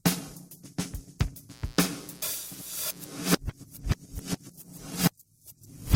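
From 1.49 s to 3.08 s a mains buzz sits under the sound, roughly 25 dB below it. Sharp switching spikes, entering twice per cycle of a 60 Hz supply, produce a steady, raspy rasp rather than a smooth hum. On a spectrogram this shows as a comb of evenly spaced horizontal lines at multiples of 60 Hz, climbing well into the kilohertz range, that starts and stops abruptly at those times. The waveform carries a fine, regular spiky ripple.

At 3.37 s the quality drops suddenly, with no gap, and stays low to the end of the clip. This is an adaptive stream at a lower bitrate: the player switched to a leaner version when the connection slowed. Codec artefacts rise. This fits a step down within Opus from about 64 kbit/s to about 16 kbit/s. On a spectrogram the energy from 3.37 s onward turns blotchy and less detailed.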